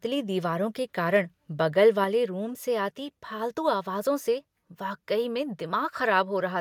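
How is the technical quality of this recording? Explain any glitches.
The recording has two brief glitches, both tied to the microphone input level.

From 1.15 to 1.17 s there is microphone overload, likely from input volume set slightly too high. Peaks pass the converter's limit by about 1 dB, flattening a small share of waveform tops into a short harsh crackle.

At 2.04 s the microphone volume is stepped down. The call software likely cut the input volume in one jump, so the sound and background abruptly drop by about 4 dB.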